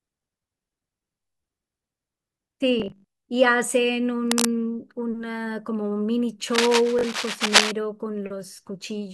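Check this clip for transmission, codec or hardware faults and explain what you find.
The speech carries two kinds of fault: Bluetooth stutter twice and cable scratch noise twice.

Bluetooth stutter appears from 2.80 to 3.04 s and again at 6.99 to 7.03 s. Late or missing packets made the receiver replay its last short buffer. About 160 ms drops out across roughly 240 ms, with the longest run near 80 ms. The second stutter loses about 40 ms. Each is a buzzing repeat, and the speech then resumes further on. That regular repetition of the same slice sets it apart from scratching noise.

Cable scratch noise covers 4.28 to 4.45 s and a longer stretch from 6.49 to 7.72 s, which overlaps the second stutter. The audio has dense, irregular rustling bursts at roughly the level of the speech. This is likely a worn cable or connector whose contact resistance changes as it moves. Unlike stutter, it adds noise over the speech instead of repeating it.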